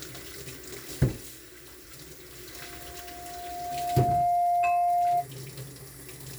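A recording of everyday sounds has a loudspeaker feedback squeal from 2.55 to 5.27 s. A single tone near 703 Hz swells over roughly one and a half seconds to about 10 dB above the sound, as the loop regenerates. Unlike a steady interfering tone, it builds on itself.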